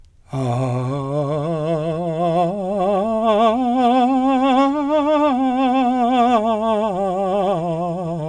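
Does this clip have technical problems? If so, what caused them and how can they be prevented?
No, this music clip has no technical faults to report.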